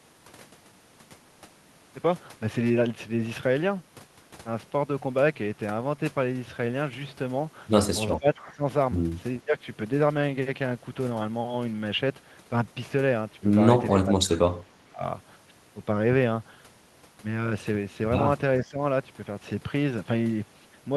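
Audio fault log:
8.18–8.63 s: speech suppressed in double talk. The level sags hard, about 20 dB down at its deepest, for most of that stretch.
9.45–9.56 s: speech suppressed in double talk. A quick dip of about 10 dB.
13.9–15.03 s: speech suppressed in double talk. This is the big one, dropping by as much as about 25 dB for well over half a second.
18.6–18.79 s: speech suppressed in double talk. Another short dip of around 10 dB.
The likely cause is an echo canceller that hears both ends talking at once, can't tell this talker from the loudspeaker echo, and turns everything down.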